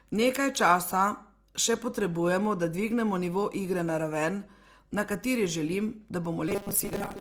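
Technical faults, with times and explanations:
Throughout: mains hum, a steady 50 Hz tone sitting about 35 dB below the speech, the kind of pickup a ground loop or nearby transformer introduces.
Throughout: Opus compression is the likely cause of the plainly audible grainy, rough texture; band energy is kept but detail is filled with noise.
6.48–7.21 s: robotic sound from repeated short buffers, just after "raven na kateri želim"; speech turns to a rigid metallic 200 Hz buzz, likely from 5 ms chunks being repeated about half the time.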